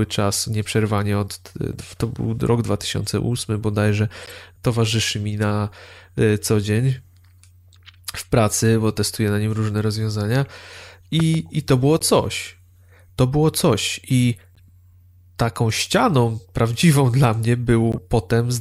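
At 4.23 to 4.31 s and 6.65 to 6.68 s, corrupt frame decoded errors: damaged compressed frames were played anyway, spraying energy at wrong frequencies as short glitches. Each shows as a brief vertical smear on a spectrogram, spanning a few frames. From 11.20 to 11.37 s a loud pop lands twice over the continuing speech, likely a plug or switch transient. On the waveform it appears as two tall spikes, about 10 dB above the signal. Similar corrupt-frame glitches follow at 11.99, 14.55 and 17.92 s, the last the loudest.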